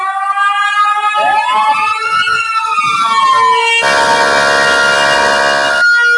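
From start to finish, a noise suppressor meant for speech is working on this non-speech sound. It treats steady material and decaying tails as noise, so the level swings by roughly 5 dB and the sound pumps and thins, while sharp attacks pass through. That attack-versus-sustain pattern distinguishes it from plain compression or a gain fault.

The suppressor then cuts deeper in two places. From 1.94 to 2.10 s, for about 150 ms, the sound drops by about 7 dB. From 2.43 to 2.73 s, for about 300 ms, it drops by about 5 dB. Sustained content sinks. Unlike a dropout, it never goes silent.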